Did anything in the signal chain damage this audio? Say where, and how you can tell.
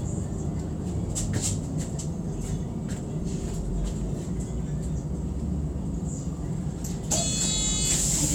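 No, nothing in the chain audibly damaged these sounds; the signal holds steady and continuous throughout, with no point where any stage can be heard altering it.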